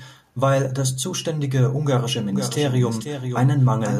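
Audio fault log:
2.33 s to the end, doubled audio track: from 2.33 s a second copy of the speech runs alongside the first, trailing it by about half a second and sitting roughly 10 dB lower. It snaps in abruptly rather than building up, and it is full-band with no decay or room colour, so it sounds like a flat, detached repeat rather than an echo. That points to the same signal being likely mixed in twice, through a second, slower capture path or an edit holding two out-of-step copies.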